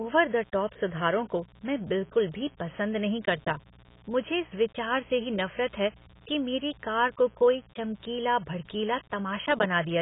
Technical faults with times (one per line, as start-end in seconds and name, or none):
0.00-10.01 mains buzz
0.00-10.01 AAC compression